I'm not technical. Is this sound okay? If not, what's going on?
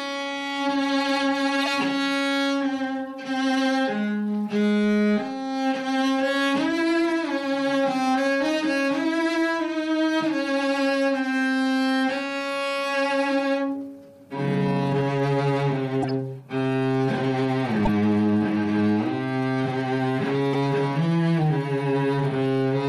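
No. There are brief chirps or bursts of noise at about 1.62 to 1.64, 16.02 to 16.11, 17.85 to 17.89 and 20.53 to 20.56 seconds. These are a corrupt frame decoded: a few damaged chunks of the compressed file were played anyway, putting sound at the wrong pitches.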